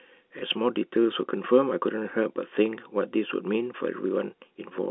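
From 0.39 to 0.42 s, packet loss with last packet repeated fills a 30 ms gap, consistent with one lost packet, with a replayed chunk. It is heard as a small blip. On a spectrogram, the speech sits within the 250 Hz to 3.5 kHz telephone band.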